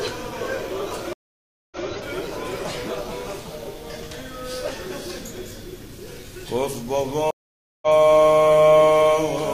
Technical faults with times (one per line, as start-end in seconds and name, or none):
1.13-1.84 stream reconnect
7.31-7.88 stream reconnect